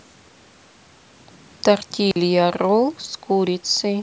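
At 2.11 s the speech cuts to a block of digital silence for 46 ms, until 2.16 s, which fits a 2048-sample buffer not filled in time. The waveform shows a flat line, and the spectrogram a blank vertical gap edged by broadband streaks.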